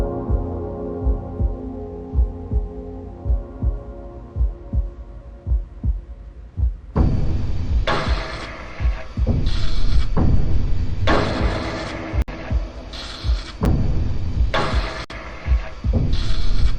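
Blocks of digital silence fall at 12.22 to 12.28 s, at 13.65 s, and at 15.04 to 15.10 s. At each one, a run of samples has been replaced by zeros, so the audio drops instantly to nothing and returns with no fade. The 60 ms and 56 ms gaps are heard as brief holes, while the 8 ms one at 13.65 s is short enough to register as a single tick.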